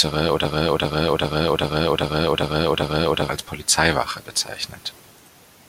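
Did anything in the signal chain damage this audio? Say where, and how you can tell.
Yes. From 0.45 s to 3.29 s the speech sticks in a broken-record loop: one 396 ms fragment plays seven times back to back, identical each pass, and the sound that belonged there never arrives. Likely a stalled playback or stream buffer resending its last fragment.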